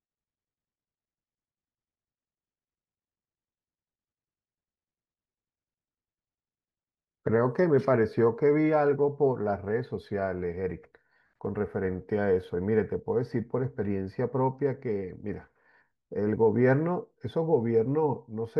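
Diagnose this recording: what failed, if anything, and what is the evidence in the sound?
Nothing failed; the recording shows no evidence in the sound of a fault at any stage.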